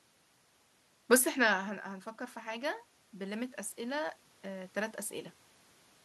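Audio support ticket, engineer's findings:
Automatic gain rising, 1.84 to 5.04 s. Voice and room noise swell together, about 6 dB over roughly 3 s. Probable component: AGC on capture. Input dropped about 16 dB after talker moved back around 1 s. AGC read that as too quiet. Gain ramped up slowly, lifting background with voice.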